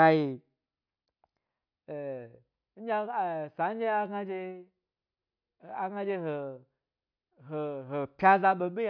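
Nothing goes wrong anywhere in this bit of speech, so there's no fault here to point out.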